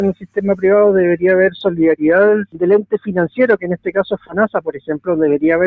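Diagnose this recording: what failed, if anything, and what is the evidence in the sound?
The call processing stage is the culprit: a noise suppressor meant for speech was left on across the whole clip. Level swings by around 10 dB as it keeps mistaking held material and tails for noise, so the sound pumps and thins. The band tops out at 8 kHz, as call processing does.

You can hear the same suppressor clamp harder at 0.13–0.40, 2.45–2.62, 2.82–3.12, 3.57–3.93, 4.15–4.37 and 4.55–5.08 s. These are stretches of sound cut by the noise suppressor, dipping about 16 dB (about 14 dB at 4.15 s), with sustained parts sinking while attacks get through.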